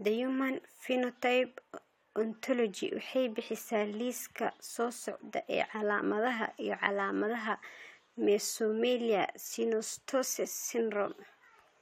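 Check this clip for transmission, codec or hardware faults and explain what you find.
Nothing faulty turns up anywhere in this speech recording.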